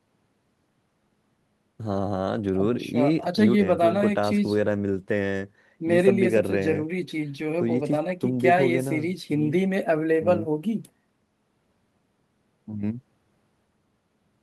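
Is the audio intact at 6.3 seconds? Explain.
Yes, the audio at 6.3 seconds is intact, with no audible dropout, click, distortion or other fault at that point in the speech.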